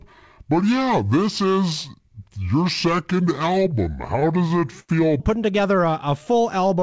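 From 0 to 5.2 s there's a section at the wrong speed, running at 0.666 times normal, about seven semitones low, deep and sluggish, likely from a mismatched playback clock.

Between 3.36 and 4.91 s, repeated stalls (stutter) show up: eleven brief holds where the receiver stretched the last sound, the longest 89 ms, so it drags and hiccups.

From 5.75 to 6.69 s, a jitter buffer slow-down adds 80 ms, running at 92% speed with unchanged pitch, so sounds draw out slightly. The G.722-style call path caps everything at 8 kHz.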